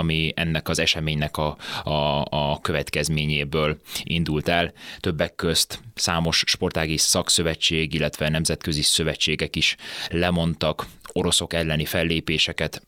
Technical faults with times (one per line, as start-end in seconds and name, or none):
none